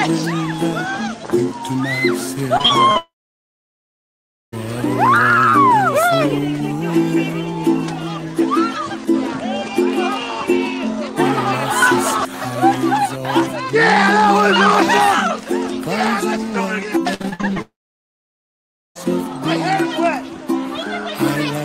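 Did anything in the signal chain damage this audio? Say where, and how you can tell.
Yes, the network stage did. Repeated packet loss (robotic sound) hits 2.57 to 2.97 s (four short holes, longest 38 ms) and 17.14 to 17.58 s (seven holes, up to 59 ms), each patched by stretching the last sound, so it turns choppy.

Right after each burst there's a long network dropout, 2.97 to 4.54 s and 17.62 to 18.97 s. The receiver smears the last sound briefly, then it's about 1.4 s and 1.2 s of near-silence. Likely the stream simply stopped arriving, and that audio never returns.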